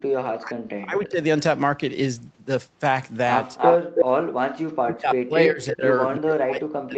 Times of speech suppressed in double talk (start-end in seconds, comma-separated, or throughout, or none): 0.00-1.22, 4.82-5.87, 6.19-6.97